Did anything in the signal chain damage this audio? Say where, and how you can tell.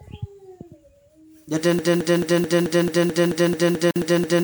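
Yes, two things. At 1.79 s the audio falls into a broken-record loop: a chunk of about 218 ms repeats exactly, back to back, twelve times, right through to the end of the clip. Whatever should have played after 1.79 s is gone. The likely cause is a stall at the playback or streaming stage, where the player kept re-sending the last buffer it held instead of fresh audio.

There's also a gap at a join of encoded pieces at 3.91 s: a silence of about 48 ms with edges smeared by the codec, after which the sound carries on where it left off. That points to the codec stage. The pieces were encoded separately and joined without trimming, so the encoder's start-up delay and the padding on the last frame were both left in as dead air.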